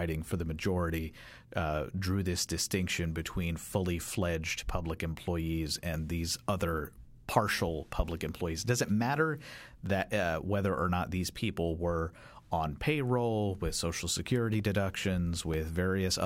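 From 13.55 to 15.54 s there are periodic USB or driver dropouts: roughly three tiny silent gaps, each a couple of milliseconds, once a second, ticking through the speech.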